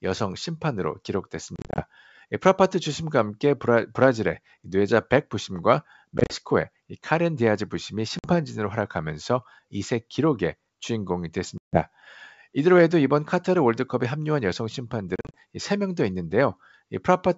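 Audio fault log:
1.56 to 15.38 s, packet loss on an ADPCM call: five dropouts, at 1.56 to 1.84 s, 6.18 to 6.35 s, 8.19 to 8.29 s, 11.58 to 11.82 s and 15.16 to 15.38 s. Each gap falls to hard-edged silence, 50 to 150 ms in total. The first, second and last are broken into short holes of up to 30 or 40 ms. When the sound returns, the decoder's predictor and step size no longer match the sender's. So the speech comes back slightly distorted before settling. The wideband G.722 sound between dropouts stays clear.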